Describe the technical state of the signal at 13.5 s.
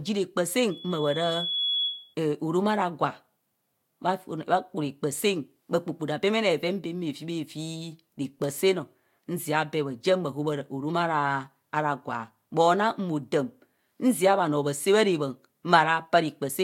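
At 13.5 s the speech signal is intact, with no fault present at that moment.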